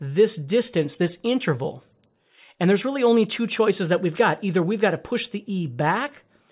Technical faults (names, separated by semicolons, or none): none